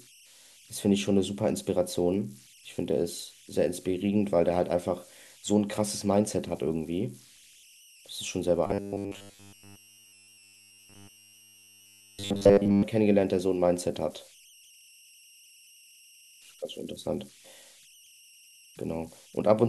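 A speech recording runs about 20 s and carries two faults. Converter idle tones sit under it throughout. A whistle near 3 kHz, roughly, lies about 29 dB below the speech. It shows in pauses and roughens quiet passages. An undithered delta-sigma converter cycling through fixed bit patterns on low-level input produces it. From 8.67 to 12.83 s the voice turns into a rigid metallic buzz at 100 Hz. This is robotic sound from repeated short buffers. A 10 ms chunk is likely being looped while most of the real audio is skipped.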